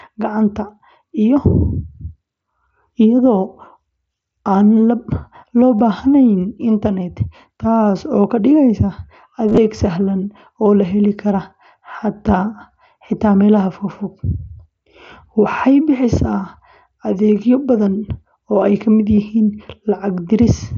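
Concealed Bluetooth headset packet loss appears at 5.79 s, again from 9.49 to 9.58 s just before "sahlan oo la heli", and at 19.16 s after "oo ay ka mid". Packets travelling from headset to phone over the mSBC wideband link went missing, and the receiver patched each gap by repeating the best-matching stretch of recent waveform. The brief 15 ms and 22.5 ms gaps come from two and three lost frames. The middle cluster, scattered over 90 ms with runs up to 22.5 ms, leaves a buzzy tone held at full level, with a small warble where real audio returns.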